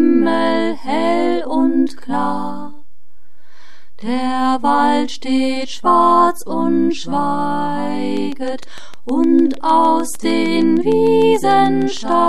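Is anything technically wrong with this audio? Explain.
Yes. From 8.17 to 12.13 s, a train of clicks adds roughly thirty regular ticks at 6.58 per second, likely from interference pulses. They tick over the sound and through pauses, and appear as evenly spaced vertical lines, peaking about 5 dB above the signal.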